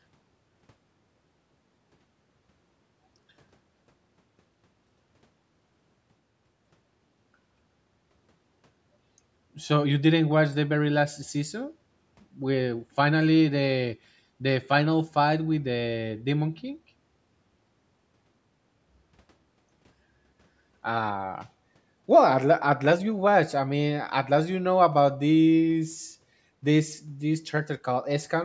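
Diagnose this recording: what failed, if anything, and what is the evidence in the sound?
Nothing has failed in this speech recording: the signal carries the expected marks of a call's microphone processing, with the lowest bass trimmed away by its high-pass filter and no content above 8 kHz, both normal for that path.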